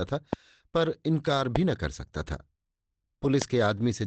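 At 0.33–0.35 s a loud pop cuts across the speech as a sharp click around 15 dB above it, while the talking carries on underneath. A brief voltage spike, likely from a switch, plug or static, was added to the signal. Unlike a dropout, nothing is missing. At 1.37–1.39 s a lost packet rebuilt from error correction shows up as a short, rough, noisier patch, which fits one 20 ms packet replaced by the low-bitrate copy carried in the next packet. There is no silence or repeated fragment, only a brief grainy blur in the call audio. The same pop returns at 1.56–1.58 s. A second, longer rebuilt stretch at 3.23–3.29 s fits two separate packets, and a final pop lands at 3.42–3.44 s.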